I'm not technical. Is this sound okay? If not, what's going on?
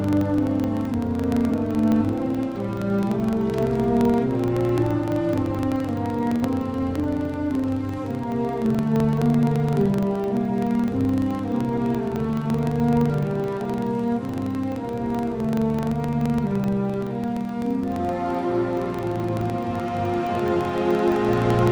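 No. A steady low buzz, about 23 ticks a second, runs throughout and follows the loudness. The cause is a filter restarted on every block, fitting 2048-sample blocks.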